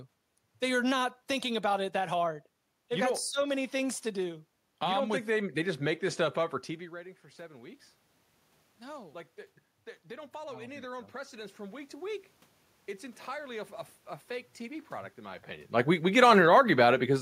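At 10.07 s, after "like they they", automatic gain rising starts. The input dropped about 16 dB. The gain control lifts about 5 dB until 12.3 s. Voice and room noise swell together. A second rise of about 4 dB runs from 13.25 to 16.02 s.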